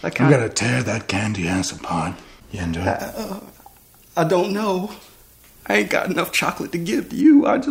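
From 2.99 s to 7.21 s the audio has pre-emphasis left on: a treble boost matching the FM 75 µs curve was never undone by de-emphasis, leaving 10 kHz about 13 dB hotter relative to 1 kHz. The sound turns thin, bright and harshly sibilant.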